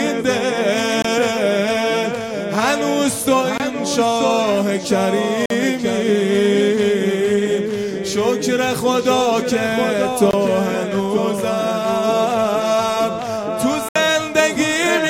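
Blocks of digital silence at 1.02, 3.58, 5.46, 10.31 and 13.89 s cut the audio to silence and back with no fade. The gaps last about 23, 23, 46, 23 and 70 ms, whole multiples pointing to 1024-sample output buffers left unfilled.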